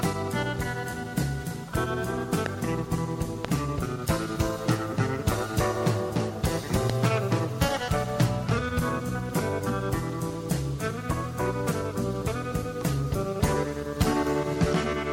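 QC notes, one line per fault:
2.46–2.48, 3.45–3.47 and 6.90–6.92 s, loud pop: three sharp, very short pops, the first two about 20 dB over the audio and the last a bit softer, while the sound carries on underneath. Each is likely a voltage spike from a switch, plug or driver glitch.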